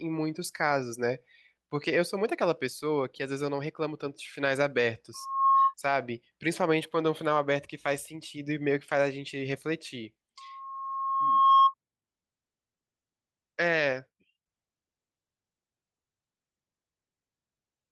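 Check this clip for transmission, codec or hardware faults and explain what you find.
The speech carries loudspeaker feedback squeal twice, from 5.14 to 5.74 s and from 10.37 to 11.74 s. Both times a single 1.1 kHz tone swells out of the speech until it sits roughly 10 dB above it, rising within a fraction of a second the first time and over about a second the second time. A microphone is picking up the loudspeaker it feeds, and at that frequency the loop has more gain than loss. Unlike a steady interference whistle, it grows on its own.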